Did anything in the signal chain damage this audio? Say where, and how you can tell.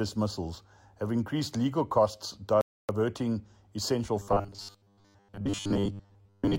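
Yes. The sound drops to silence from 2.61 to 2.89 s, then resumes. This is a playback stall, likely from the player running out of data or its thread blocking.

From 4.2 s to the end, a rigid 100 Hz buzz sets in. This is robotic sound from repeated short buffers, likely 10 ms chunks looped while most real audio is skipped.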